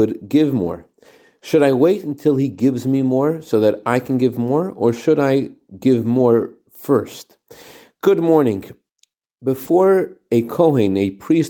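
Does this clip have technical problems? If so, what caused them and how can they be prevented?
Yes. Lost packet rebuilt from error correction: at 2.53–2.59 s, between "I wait until he" and "me more so that", at 4.11 s after "more so that I", at 6.15–6.21 s after "or should I give", and at 9.67–9.69 s, the speech turns briefly rough and grainy without dropping out. Packets never arrived, so the decoder played the low-bitrate backup copies carried in the following packets. The 40 ms stretches fit two consecutive 20 ms packets, and the 20 ms ones fit a single packet. Stronger in-band error correction and a larger jitter buffer would make this less audible, but the reliable fix is a cleaner network path with less packet loss.

Short concealed packet loss: at 9.65–9.69 s there is a brief smear where the sound is stretched out rather than heard clearly. About 20 ms of audio went missing, and the receiver filled that gap by extending the preceding sound before blending back into the real signal. 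The rebuilt frame at 9.67 s falls immediately after this, so the two faults run together into one rough patch. Reducing packet loss and jitter on the link would prevent these concealment gaps.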